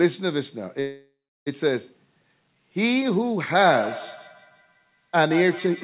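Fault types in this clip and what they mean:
Call audio freeze: From 0.8 to 1.48 s the sound stalls into a fading continuation lasting about two thirds of a second, with roughly 0.32 s of silence. Packets were likely held up and the jitter buffer emptied, so everything afterward resumes about 0.66 s later with nothing lost.
Feedback echo between two devices: From 3.64 s to the end, the sound returns in repeats roughly every 150 ms, peaking at about 12 dB below the direct sound. A second device in the room replays this microphone's signal, which is picked up again and escapes echo cancellation.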